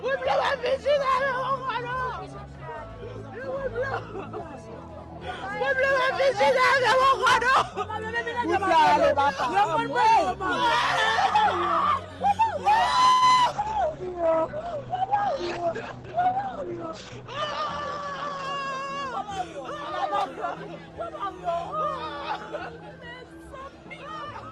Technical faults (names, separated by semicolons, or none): call audio freeze; short concealed packet loss; call bitrate drop; jitter buffer slow-down; jitter buffer speed-up